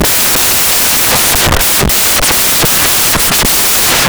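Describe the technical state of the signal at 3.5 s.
At 3.5 s, as throughout, the samples are built from the wrong bytes: low-order bits land in the high positions, giving loud, harsh broadband noise.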